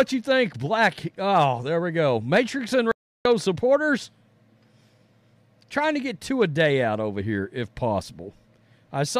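Speech with an audio dropout to silence from 2.92 to 3.25 s, dead silence with no room tone, a flat waveform line and blank spectrogram, likely from a lost input.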